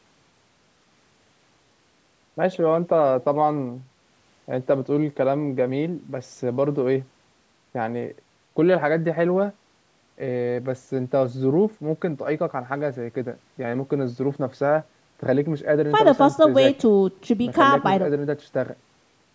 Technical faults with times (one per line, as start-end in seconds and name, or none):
none